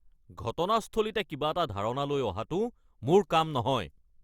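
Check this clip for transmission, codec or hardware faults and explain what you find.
No faults can be heard anywhere in the recording. Nothing in the speech calls for further explanation.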